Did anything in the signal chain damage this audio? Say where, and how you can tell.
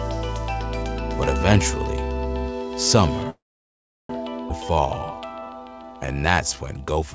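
Yes. At the network and jitter-buffer stage, a call audio freeze runs from 3.30 s to 4.11 s. The sound carries on briefly as a fading continuation of the last moment, then drops to silence for about 0.72 s of the roughly 0.79 s gap. Playback then resumes where it left off, with nothing lost. The cause is likely delayed packets draining the jitter buffer, so the receiver filled time until delivery recovered.

A skip ahead follows at 4.49 s. Playback jumps forward almost seamlessly, with barely any gap at the join, but roughly 0.4 s of audio is gone and the two sides butt together directly. With later audio already queued, a chunk was dropped in transit or by the jitter buffer, which produces an abrupt splice rather than a pause.

A jitter buffer slow-down then runs from 4.62 s to 7.10 s. The audio plays at about 85% speed with pitch unchanged, so sounds are drawn out, adding 376 ms overall. 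The receiver rebuilt its reserve by repeating individual pitch periods and short stretches of pause many times over. The band-limiting to nothing above 8 kHz is consistent with the G.722 call codec path, operating at 64 kbps.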